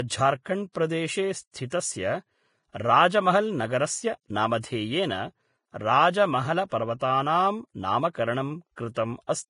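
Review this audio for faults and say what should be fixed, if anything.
Vorbis compression runs throughout the clip. Nothing is present above 10.5 kHz, and the remaining treble is hissy and grainy, with consonant attacks blurred. This heavy damage is likely from Vorbis encoding at a low bitrate, around 28 kbps. The encoder lowered its cut-off and quantised the upper residue so coarsely that fine detail was replaced by noise of similar energy. To prevent it, encode speech at a higher Vorbis quality setting, or keep a lossless master and transcode from that.

Pre-echo occurs at 0.72 to 0.75 s (28 ms), 1.70 to 1.72 s (22 ms), 8.76 s (17 ms) and 8.94 to 8.96 s (21 ms). A brief hiss precedes each sharp speech onset, and the onset itself sounds softened. The codec spread quantisation noise evenly across a transform block, so noise sized for the loud attack also filled the quiet moment just before it. 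To prevent it, use a higher bitrate, or an encoder whose block switching responds more aggressively to transients.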